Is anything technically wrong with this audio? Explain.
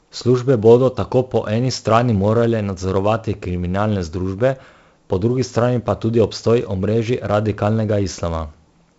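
Yes. Throughout the speech there's 4-bit ADPCM compression: each sample is coded as a coarse step from a prediction, so a gritty hiss rides on every loud syllable and attacks smear. Nothing above 7.7 kHz, which fits a 16 kHz sample rate, dulls it too.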